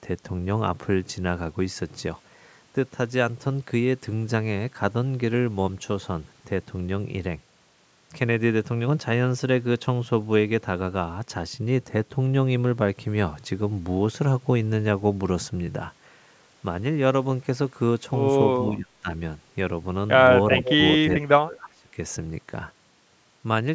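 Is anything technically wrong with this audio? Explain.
Yes. At 18.6–19.08 s, 20.59–20.83 s and 21.24–21.89 s the speech dips sharply, by up to roughly 20 to 25 dB. This is likely speech suppressed in double talk: an echo canceller mistook overlapping talk for echo and turned it down. From 20.51 to 20.74 s a copy of the speech returns 373 ms late, about 10 dB below it. This is likely an echo leak: a loudspeaker's sound escaped cancellation and was sent back.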